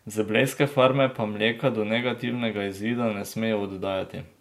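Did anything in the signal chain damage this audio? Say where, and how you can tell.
Yes: word clock ticks from 0.52 to 3.58 s, roughly once a second, at the digital interface. An unlocked receiving clock drifts slightly and slips single samples.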